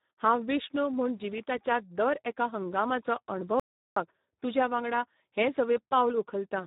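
From the start the speech carries heavy Speex codec damage: the low-bitrate CELP coding leaves little detail in the excitation, so voices come out noisy and hoarse, which fits roughly an 8 kbps setting. Nothing survives above about 3.8 kHz.

Then at 3.60 s, right after "जिविताच्या दर एका हंगामाचो", there's an audio dropout to silence lasting 0.37 s, until 3.96 s. It's dead silence with no room tone, most likely the input dropping out briefly, and it picks back up at "तुज्या वांगडा हें".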